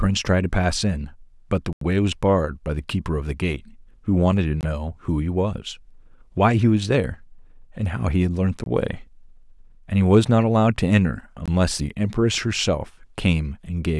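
It's a speech recording with four blocks of digital silence, where the audio cuts out and back with no fade. The first, at 1.73 to 1.81 s, lasts about 85 ms and reads as a short hole, which fits a 2048-sample buffer. The other three, at 4.61, 8.64 and 11.46 s, are about 21 ms each, which fits a 512-sample buffer. The likely cause is output buffers not being filled in time.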